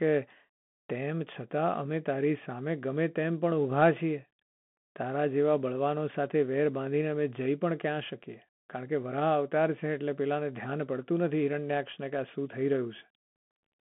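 From start to end, the speech carries Bluetooth CVSD headset codec damage. The band runs only from about 150 Hz to 3.4 kHz, fitting a 64 kbps CVSD link. Its one-bit delta steps lag loud high sounds, so s sounds turn scratchy over a granular hiss.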